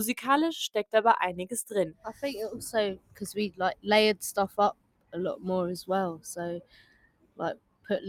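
A noise suppressor built for speech runs across the whole clip. It treats sustained parts of the sound as noise and pulls them down. Level swings by around 20 dB. The result pumps and thins, while sharp onsets pass.

The suppressor cuts sound harder five times: 1.91 to 2.23 s, 2.95 to 3.23 s, 3.5 to 3.87 s, 4.48 to 5.15 s, and 6.61 to 7.89 s. Drops reach about 17 to 19 dB. Held and decaying sound sinks abruptly there. The last cut lasts about a second.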